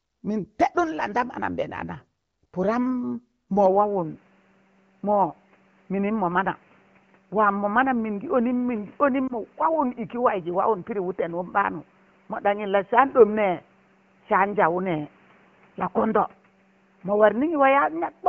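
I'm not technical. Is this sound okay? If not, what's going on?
No. From 3.66 s to the end, the recording likely switched to a poorer input device, such as a different microphone or a headset in call mode. With no gap and no jump in loudness, the sound turns dull and muffled, losing everything above about 3.2 kHz, and a faint new background hiss comes in.

Between 9.27 and 9.33 s, there are lost AMR speech frames: one 20-millisecond piece of the phone signal was damaged in transmission, so the receiving phone filled it with a fading copy of the moment before. You hear a brief dip or wobble.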